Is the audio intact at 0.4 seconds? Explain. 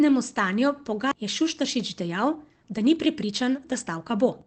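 Yes, the speech at 0.4 seconds is intact, with no fault at that moment.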